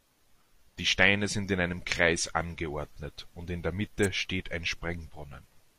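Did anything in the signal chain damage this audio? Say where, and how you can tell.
Yes. An electrical switching spike, most likely from a nearby switch, motor or static discharge arcing into the analogue wiring, snaps through at 4.04 s, between "angeordnet und in der" and "steht ein". It is a sharp, very brief snap laid over the speech rather than replacing it.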